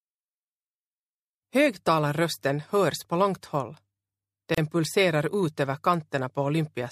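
The clip's audio breaks at 4.55 to 4.58 s with a gap at a join of encoded pieces: a gap of about 32 ms, left by encoder start delay and last-frame padding kept at the splice. Unlike a dropout, the sound resumes exactly where it stopped, with smeared edges.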